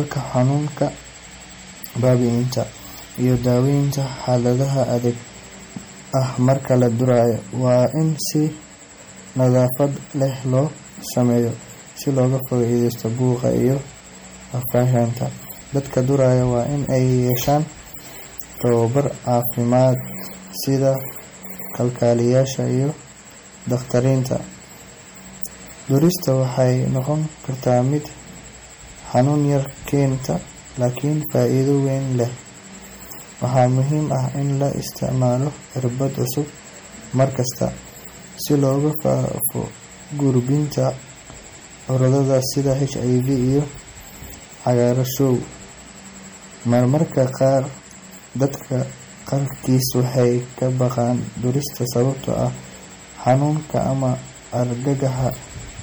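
Hard clipping runs through the whole speech clip. Loud peaks are driven about 8 dB past what the signal path can carry, so a small fraction of samples, under half a percent, are sliced flat. That gives crackle on the loudest syllables, seen as squared-off tops on the waveform and thin vertical broadband streaks on a spectrogram.

Throughout, the speech also sounds watery and swirly, with chirpy, metallic sibilants and softened attacks. This is likely MP3 compression at a low bitrate, fitting about 48 kbps. A spectrogram would show patchy holes flickering frame to frame.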